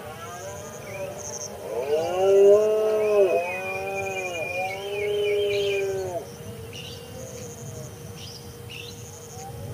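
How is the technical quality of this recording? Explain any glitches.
Nothing stood out on listening; the recording came across without any audible technical problems.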